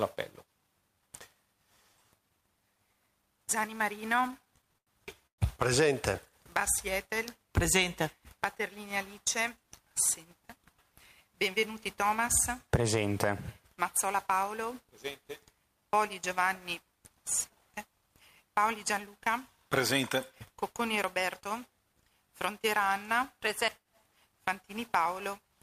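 Between 4.09 and 4.89 s there are repeated stalls (stutter). Packets reached the receiver late or more slowly than playback consumed them, so the jitter buffer ran dry eleven times in under a second. Each time, the last sound was stretched forward to cover the wait. The longest hold is 87 ms, and about 180 ms is filled in all, roughly 23% of that span. Nothing is lost, but the passage drags and jerks along in small hiccups.

At 5.27 s a short call audio freeze follows, lasting until 5.40 s. The sound stops and is replaced by a fill of 116 ms, of which about 100 ms is plain silence. Playback then resumes where it left off. This is likely another jitter buffer underrun from held-up packets, which put a 116 ms gap into the audio and pushed everything after it later by that amount.

From 8.37 to 9.58 s a jitter buffer speed-up brings that delay back down. The receiver trimmed short pitch-period pieces repeatedly, removing something like 70 ms, so the audio runs at 104% of normal speed with pitch unchanged. 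A second speed-up from 20.50 to 21.42 s again cuts around 70 ms, this time at 106% speed, which sounds hurried over that stretch.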